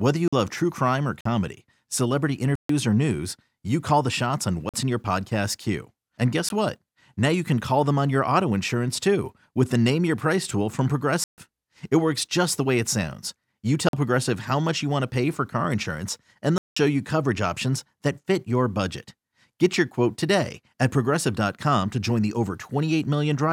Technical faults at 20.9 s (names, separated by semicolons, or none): none